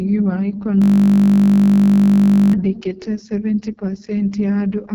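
Throughout, the speech has the rough, raspy character of the AMR wideband (HD Voice) codec at its lowest rate, consistent with about 6.6 kbit/s; a spectrogram shows nothing above 7.2 kHz. From 0.82 to 2.53 s, a system hang loop replays a single 20 ms buffer, producing a steady 50 Hz buzz that shows as an identical repeating waveform cycle and flat horizontal harmonic bands.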